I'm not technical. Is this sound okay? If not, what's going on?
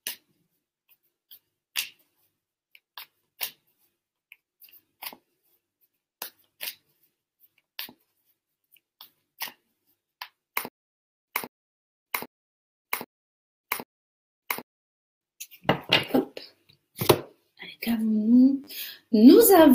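No. Two kinds of fault can be heard.

Repeated buffer, at 8.6 s, 13.76 s and 18.64 s: each time, a tiny slice of sound, about a hundredth of a second long, plays two or more times in a row. At 8.6 s it plays four extra times, at 13.76 s once, and at 18.64 s three times. This happens when the next bit of audio arrives late and the device replays the slice it already has. Because each slice is so short, the repeats come out as a quick click or brief buzz rather than an obvious echo, and up to a few hundredths of a second of real sound are lost each time.

Stutter with silent gaps, from 10.68 s to 15.22 s: a short burst of about 0.19 s plays, then dead silence for about 0.59 s, and the same burst returns every 0.79 s, five times in all. Whatever should have been heard during those four and a half seconds is missing. The likely cause is playback or the stream stalling, grabbing the last fragment again on each retry, and then running out of sound.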